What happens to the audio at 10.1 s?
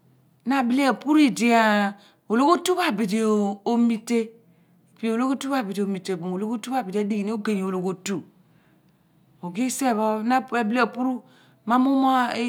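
Nothing goes wrong at 10.1 s; the speech carries on intact through that moment, with no dropout, click, distortion or other fault to be heard.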